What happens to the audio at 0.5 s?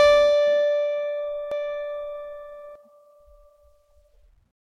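Nothing goes wrong at 0.5 s; the music plays through that moment intact, with no dropout, click or other fault.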